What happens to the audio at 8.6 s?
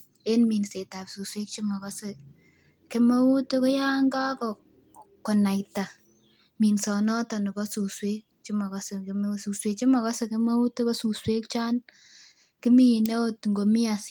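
Nothing goes wrong at 8.6 s: the speech continues intact through that moment, with no dropout, click, distortion or other fault to be heard.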